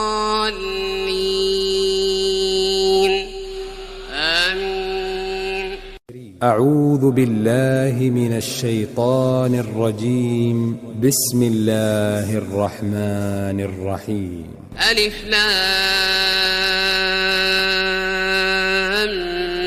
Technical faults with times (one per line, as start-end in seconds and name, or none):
none